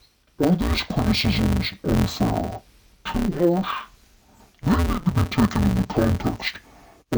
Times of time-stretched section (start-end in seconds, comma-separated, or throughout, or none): none